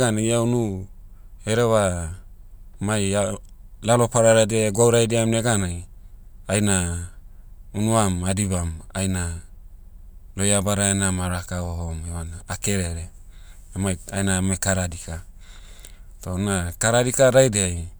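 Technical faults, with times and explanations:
No technical faults can be heard in this speech clip.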